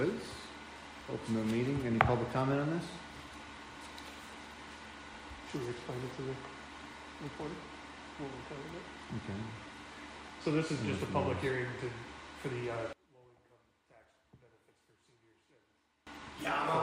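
From 12.93 to 16.07 s, one stereo channel has likely been inverted in polarity, so when the two channels are combined, everything they share cancels. The sound collapses by about 27 dB, leaving only a faint remnant of the channel difference until it returns.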